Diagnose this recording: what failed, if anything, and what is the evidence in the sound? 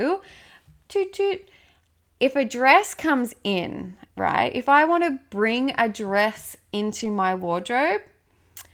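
A network fault: lost packets rebuilt from error correction. From 6.99 to 7.05 s, just after "to bring a dress", the speech turns briefly rougher and noisier, with no gap. About 40 ms was rebuilt, which fits two lost packets replaced by their low-bitrate copies carried in the following packets.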